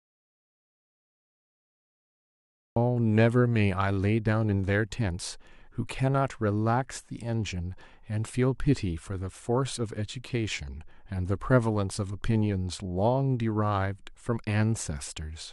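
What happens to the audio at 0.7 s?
At 0.7 s there is nothing at all: dead digital silence with no room tone, part of an audio dropout to silence that is already under way when the clip begins and lasts until about 2.76 s. The likely cause is a lost input, with the recorder writing silence meanwhile.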